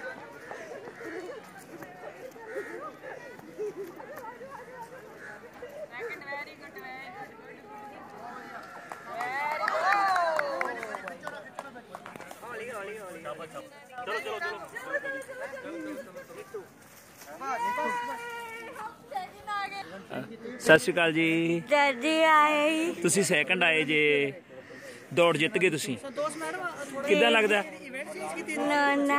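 At 13.61 s the level drops by about 7 dB, recovering at 13.98 s. At 20.67 s it rises by about 9 dB for under a tenth of a second. Each sudden gain jump moves sound and background noise together, likely from a gain step applied without a ramp.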